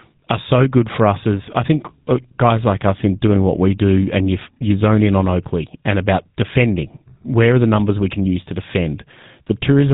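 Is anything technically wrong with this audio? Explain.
Yes. GSM full-rate codec damage runs through the whole speech clip. Each voice is modelled as a vocal-tract filter driven by sparse, regularly spaced pulses, with nothing kept above 4 kHz, which fits a 13 kbps stream. The result is a dull, buzzy, gravelly roughness that is plainly audible.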